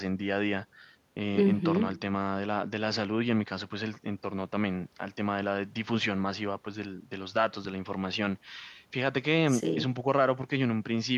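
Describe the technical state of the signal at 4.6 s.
At 4.6 s the signal is intact, with no audible fault at that moment.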